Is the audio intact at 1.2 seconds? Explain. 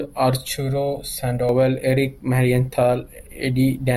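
No. Channel delay (comb filtering) affects the speech from 0.49 to 1.49 s, which includes 1.2 seconds. One channel lags the other by roughly 1.5 ms, and when the two are combined to mono, the material they share cancels at a series of evenly spaced frequencies, starting near 300 Hz. Those fixed notches carve gaps through the spectrum, so for that second the speech sounds hollow and phasey.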